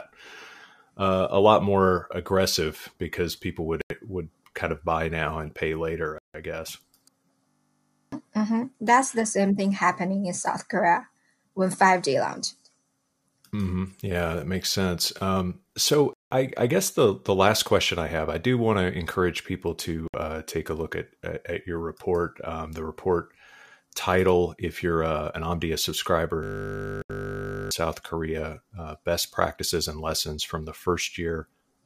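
Packets held up over the wireless link likely emptied the playback buffer in a series of Bluetooth stalls: the speech drops to silence for 88 ms at 3.81 s, 160 ms at 6.18 s, 179 ms at 16.13 s, 62 ms at 20.08 s and 76 ms at 27.02 s, then resumes. From 7.48 to 8.12 s and from 26.43 to 27.71 s, a system hang loop occurs: the computer froze while the hardware kept replaying one 20 ms piece of audio. Each loop sounds like a steady 50 Hz buzz and replaces roughly 0.7 s and 1.5 s of speech.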